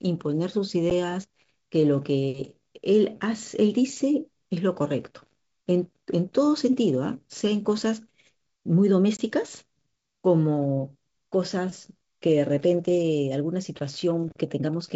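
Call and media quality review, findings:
Packet loss on an ADPCM call, 0.90 s: hard-edged gap of about 10 ms, fits roughly one lost packet. Decoder predictor and step size lose sync with the sender, so speech resumes slightly distorted.

Packet loss on an ADPCM call, 9.17–9.20 s: silent hole of about 20 ms, roughly two packets. Same desync, then slight distortion settling over tens of milliseconds. Probable component: network drops on the G.722 wideband stream at 64 kbit/s.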